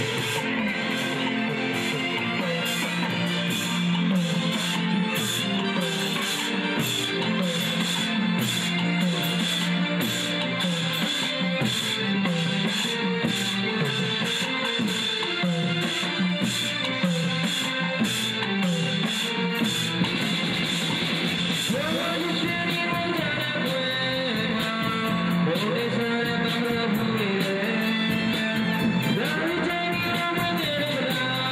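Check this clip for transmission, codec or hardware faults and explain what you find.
One fault is audible: at 16.30 s there is a single sharp click, likely from dropped samples, where a fraction of a millisecond vanishes and the waveform steps abruptly.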